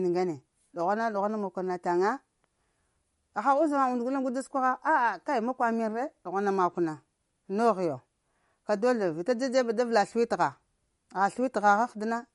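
MP3 compression damage runs through the whole recording, from start to finish. The speech has no content above about 11.2 kHz, which points to an encoder that cut the treble at a fixed frequency because bits were scarce, likely from MP3 coding at a low rate around 48 kbps. With so few bits, weak frequency lines drop in and out between frames, giving the voice a plainly audible watery, swirling quality, metallic chirps on s sounds, and smeared consonant attacks.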